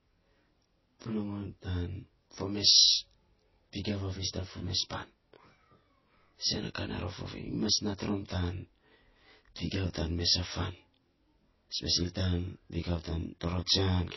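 Throughout the speech, one channel runs roughly 20 ms behind the other before the two are summed to mono. This channel delay (comb filtering) cancels shared content at evenly spaced frequencies, with the first notch near 20 Hz, so the voice sounds rough or slightly doubled.

Also throughout, the sound carries plainly audible damage from lossy coding, likely MP3 compression at a low bitrate, which fits about 24 kbps. Weak frequency lines drop in and out between frames, giving a watery, swirly quality and smeared attacks, and nothing remains above 5.8 kHz.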